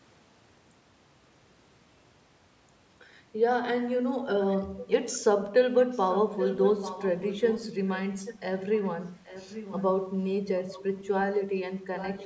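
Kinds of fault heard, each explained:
Echo leak: a delayed copy of the speech returning 833 ms late, faint to moderate, likely from a loudspeaker echo canceller letting it through; spectrograms show repeated, weaker formant patterns.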